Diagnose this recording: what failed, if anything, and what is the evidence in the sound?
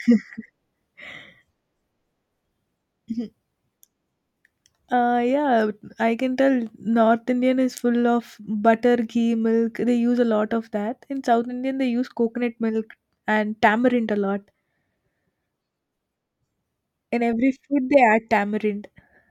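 Nothing failed: no stage from capture through playback leaves any audible fault in this speech recording.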